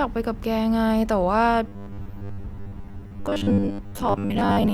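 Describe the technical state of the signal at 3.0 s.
Robotic sound from repeated short buffers covers 3.0 s, within a span running from 1.68 s to 4.73 s. The speech has become a rigid, metallic buzz fixed at 100 Hz that still loosely tracks the words. This likely comes from audio arriving too slowly, with the player looping a short stretch, which fits a 10 ms buffer, to fill the gaps. Roughly 70% of the signal here is repeated material rather than new audio.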